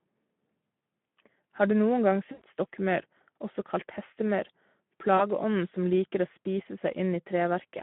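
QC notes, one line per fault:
Throughout: Speex codec. The encoder has too few bits for the excitation, with damage that fits a rate near 11 kbps, so the speech sounds noisy and hoarse, confined to a line band of 150 Hz to 3.4 kHz.
2.31 to 2.42 s and 5.17 to 5.28 s: VoIP packet loss concealed by the speech codec. Packets went missing, about 100 ms at the first gap and 20 ms at the second. The decoder extended the last pitch and filter with falling gain, so each gap smears into a fading buzz or coloured noise.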